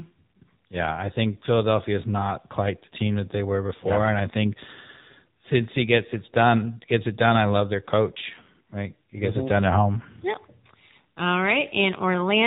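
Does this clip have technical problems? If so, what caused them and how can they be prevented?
Yes. AMR narrowband mobile codec damage runs throughout. Nothing above 4 kHz survives, and sparse pulse excitation makes the speech buzzy and synthetic, which fits a low 7.4 kbps mode. To prevent it, capture or transfer the audio over a wideband or uncompressed path rather than a low-rate narrowband mobile link.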